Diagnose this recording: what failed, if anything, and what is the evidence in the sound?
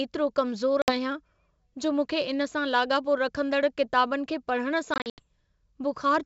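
Packet loss on the network leg of an ADPCM call; the wideband G.722 link itself sounds clean, consistent with 64 kbit/s. At 0.82–0.92 s about 60 ms of sound drops out, a few packets. At 4.94–5.22 s roughly 160 ms goes missing in fragments across 240 ms, the longest gap 80 ms. The waveform shows flat, hard-edged silent runs and the spectrogram shows blank vertical bands. Speech returns slightly distorted after each hole while the decoder's predictor and step size resynchronise with the sender's.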